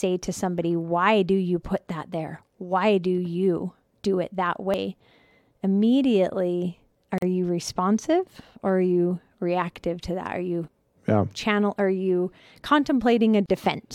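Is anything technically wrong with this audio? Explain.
Yes, there are two kinds of fault in this speech.

At 4.74 s, after "you do it that", and at 10.68 s, before "yeah channel are you", the sound skips forward. These are audio missing between chunks. About a tenth of a second vanishes, likely lost as the recorder switched between 6-second chunks.

At 7.18 to 7.22 s, just before "you responsive", and at 13.46 to 13.49 s, there are short silences of 42 ms and 35 ms. Each is a gap at a join of encoded pieces. The encoder's start delay and end padding were left in, so the sound stops and then resumes where it left off.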